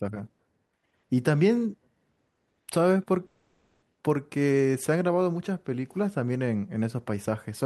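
From 3.26 to 3.83 s the speech is replaced by a buzzy continuation of the preceding sound that carries through the whole gap without falling to silence, then normal audio resumes with about 560 ms missing. This is likely a long network dropout concealed by the receiver.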